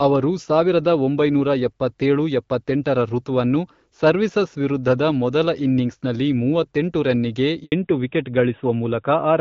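Right after "ಇನ್ನಿಂಗ್ಸ್ನಲ್ಲಿ ಮೂವತ್ತೆಂಟು ರನ್ನಿಗೆ", at 7.64 s, there's a handover gap: the call gets passed from one network to another and nothing comes through during the switch. The speech cuts out fast and you get 80 ms of dead silence, to 7.72 s. Whatever was said in that slice is simply gone, not muffled or garbled.

When the sound comes back at 7.72 s, it has taken a fallback to narrowband. Before the switch it's clear HD Voice, which fits AMR-WB at around 12.65 kbit/s with only light coding damage. From 7.72 s to the end it sounds like AMR-NB at around 12.2 kbit/s. Nothing above 4 kHz gets through, so the speech goes duller and rougher, with that flat old-phone quality, and it stays that way for the rest of the clip.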